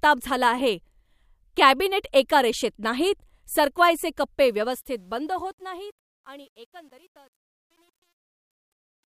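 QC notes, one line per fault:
4.45–9.2 s, truncation distortion on a fade: after "एका रेषेत नाहीत सरकवायचे", the undithered fade-out, consistent with about 10 bits, turns gritty, worst from 5.78 s.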